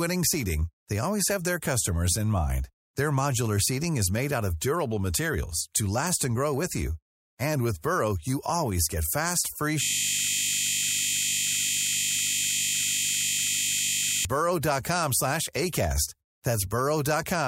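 It's a speech clip, and the trouble is a system hang loop from 9.83 to 14.25 s. For about four and a half seconds the sound collapses into a steady 50 Hz buzz: one 20 ms slice of audio repeating exactly, over and over. That's what you get when the machine or driver freezes but the sound hardware keeps replaying the same ring buffer, which fits a 20 ms buffer.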